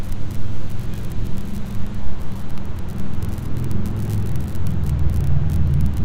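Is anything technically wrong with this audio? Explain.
No, nothing in this recording of sounds stood out as a technical problem on listening.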